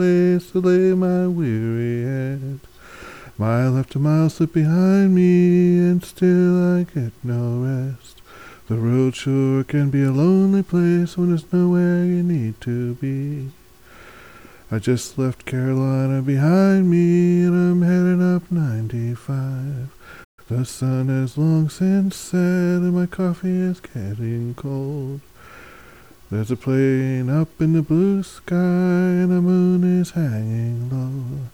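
The player most likely ran short of data or had its output thread held up, and at 20.24 s the sound cuts out in mid-flow. This is a playback stall: a clean gap of silence lasting about 134 ms, with nothing audible in it. At 20.39 s the output resumes. The interruption registers as a brief, abrupt hole.

Straight after that recovery, from 20.39 s to 21.27 s, the player works off the backlog the stall left behind with a time-compressed catch-up. It trims out short slices of audio and cross-fades across each cut, running the material at 1.15 times its normal rate without shifting the pitch. For just under a second the sound seems hurried before the pace settles back.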